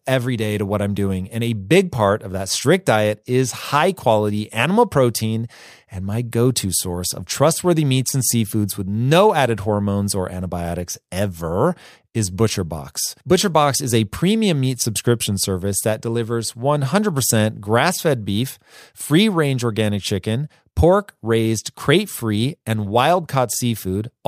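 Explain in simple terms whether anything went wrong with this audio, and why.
Nothing went wrong with this audio; no faults can be heard anywhere in the recording.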